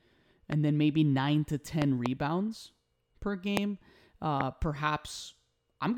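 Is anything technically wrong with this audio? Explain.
Yes. Loud pops occur at 0.52–0.54 s (just before "then maybe"), 1.82–2.08 s (a double pop), 3.57–3.59 s and 4.41–4.43 s. They are likely voltage pulses from a plug, switch, static or driver glitch, peaking about 15–20 dB above the speech, which continues underneath.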